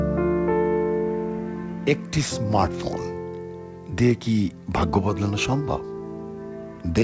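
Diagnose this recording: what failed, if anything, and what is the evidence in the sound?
Nothing failed: the audio has come through a call path with nothing above 8 kHz, which fits G.722 wideband coding, and no stage from wiring to playback shows a fault.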